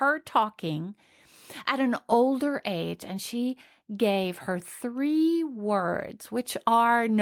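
No technical faults can be heard anywhere in the speech. There is no moment in the audio that stands out as a problem or needs a time mark.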